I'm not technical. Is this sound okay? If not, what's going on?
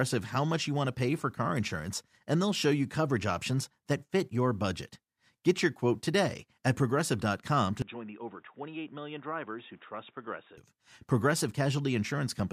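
No. From 7.82 to 10.58 s the speech turns dull and boxy, noticeably quieter, with new faint background noise, then clears abruptly. This is likely an input switched to a poorer device, passing nothing above about 3.8 kHz.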